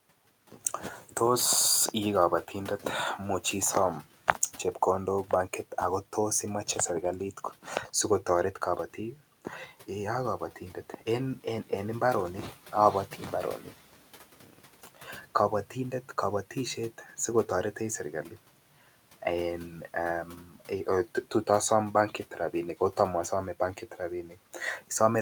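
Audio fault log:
14.41–14.61 s, 14.86–15.25 s, 16.98–17.18 s, 20.44–20.70 s and 24.28–24.38 s: speech cut by the noise suppressor. It mistakes brief stretches of speech for the room noise, which sits about 25 dB below. Each stretch drops by about 8 to 12 dB, so the affected speech sounds swallowed.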